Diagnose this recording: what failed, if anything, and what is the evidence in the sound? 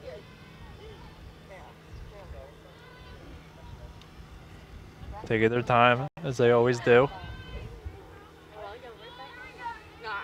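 One channel drops out from 5.48 to 5.56 s: the level falls abruptly by about 6 dB, likely one stereo channel lost in the analogue wiring before mono summing.

Bluetooth stall from 6.08 to 6.17 s: the sound cuts to 92 ms of silence, then resumes, likely interference delaying packets until the headphones' buffer ran dry.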